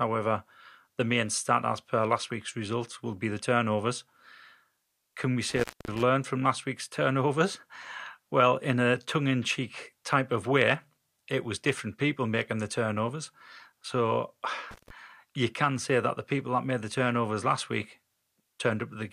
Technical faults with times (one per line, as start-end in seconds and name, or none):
5.49-6.02 intermittent contact
14.71-14.90 intermittent contact